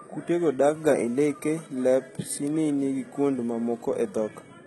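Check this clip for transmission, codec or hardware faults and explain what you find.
One codec fault runs through the whole speech clip, most likely HE-AAC compression. Nothing sounds above 11.8 kHz, yet the treble is not dull. It is rebuilt by spectral band replication, which copies lower bands upward under a coarse envelope, so its harmonics don't line up with the true ones. Sibilants turn gritty and metallic, and the damage is heavy, which fits a very low bitrate near 16 kbps. A plain low-pass would sound muffled rather than synthetically bright.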